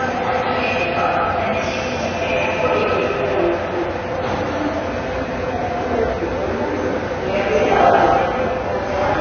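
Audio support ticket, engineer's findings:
Dull, band-limited sound throughout, nothing above 6.5 kHz, with two different kinds of coding artefacts heard together. Likely transcoding between lossy codecs: a low-rate AAC-type stage set the cut-off, then WMA re-encoded those artefacts and added its own.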